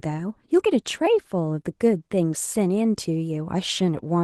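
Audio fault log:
Throughout: Opus voice compression, hybrid mode. Coarsely coded excitation below 8 kHz leaves the speech plainly hoarse and slightly robotic, which fits about 16 kbps.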